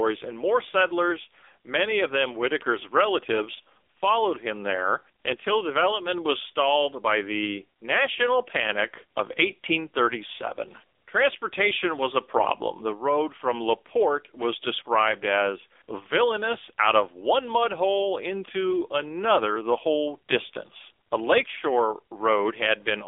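Throughout, the speech carries AMR narrowband mobile codec damage. It is band-limited to 300 Hz to 3.6 kHz, sounds heavily buzzy and synthetic, and fits a low bitrate near 6.7 kbps.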